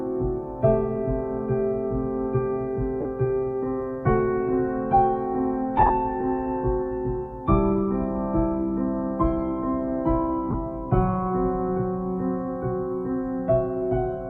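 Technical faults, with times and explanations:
3.01–3.05 s, 5.78–5.90 s and 10.51–10.54 s, lost LE Audio frames: gaps of 40 ms, 60 ms scattered across 120 ms with the longest stretch around 20 ms, and 30 ms. The LC3 decoder patches each one by replaying the last spectrum with scrambled signs, so tonal content blurs into a brief noisy smear.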